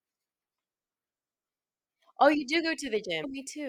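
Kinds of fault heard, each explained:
Damaged data in a compressed stream: Part of the encoded speech stream is corrupt, near the end of the clip, from 3.20 to 3.25 s. The decoder meets bytes it cannot read properly. It misreads or discards those frames, loses its place, and hunts for the next valid frame header. For about 40 ms the speech gives way to a short chirp, squawk, click or hole. Clean decoding then resumes.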